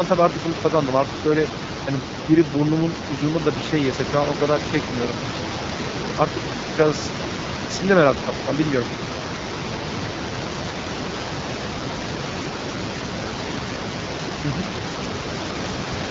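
From start to end the speech carries AMR wideband (HD Voice) codec damage, plainly rough and raspy, which fits one of its lowest rates, around 8.85 kbit/s. The pulse-driven vocal tract model loses detail, and the band above 6.4 kHz is only shaped noise. Room noise sits about 9 dB below the speech.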